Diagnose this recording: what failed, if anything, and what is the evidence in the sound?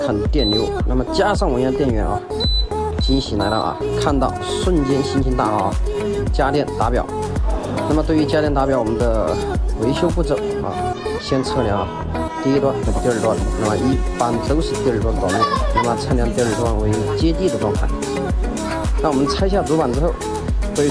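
Nothing in the chain audibly failed: there are no dropouts, clicks, distortion or level breaks anywhere in the signal path.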